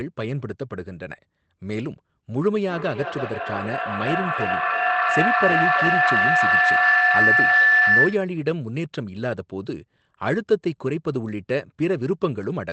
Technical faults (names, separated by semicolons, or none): feedback howl